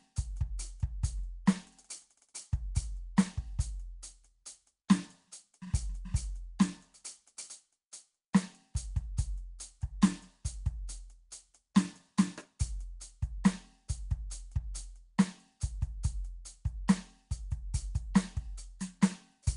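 From start to finish the music carries a rough, hissy halo and a smeared, watery blur, with nothing above 10.6 kHz. The likely cause is Nellymoser compression, the old Flash codec, at a rate that points to around 44 kbps: it codes short blocks at a fixed bit budget, so weak bands get no bits and are refilled with noise. A spectrogram would show a hard ceiling at 10.6 kHz and speckled, noisy patches between the stronger components.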